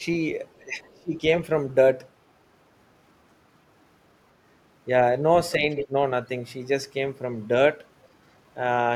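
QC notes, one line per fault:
0.00–0.05 s, other side's voice leaking through: a very faint scrap of a second voice, roughly 40 dB down, likely loudspeaker echo the canceller didn't fully remove.
0.59–1.15 s, speech suppressed in double talk: the talker drops sharply, roughly 25 dB at worst over about 0.4 s, likely the canceller ducking everything while both sides talked.
5.57–5.63 s, speech suppressed in double talk: a brief, slight dip of only a few dB, likely the canceller briefly pulling the level down during overlapping talk.
5.76–5.86 s, other side's voice leaking through: a short, fairly prominent burst of the far voice, roughly 10 dB under the talker, likely uncancelled loudspeaker pickup.
5.85–5.94 s, speech suppressed in double talk: a noticeable dip of roughly 15 dB right as that leak ends, likely the canceller clamping down on both voices together.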